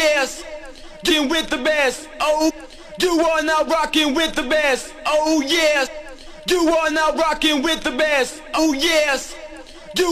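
Damaged data in a compressed stream shows up at 1.09 s, 2.49–2.51 s, 5.85–5.88 s and 8.57–8.59 s, each a burst of about 14 to 22 ms. Corrupted bytes make the decoder misread frames and lose sync, so each spot is a brief glitch.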